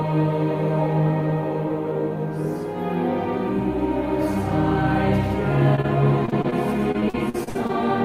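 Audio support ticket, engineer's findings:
Short concealed packet loss, 5.75 to 5.79 s and again 5.81 to 5.86 s: two quick smears, each about 20 ms patched over. Jitter buffer/network side; the receiver's concealment stretched the last bit of sound across the holes, then blended back.

Repeated packet loss (robotic sound), 6.26 to 6.54 s and 6.92 to 7.71 s: choppy stretches, with about 29% of each span filled in, longest hole about 59 ms. Same path: losses kept recurring, each new hole following soon after the last one was patched.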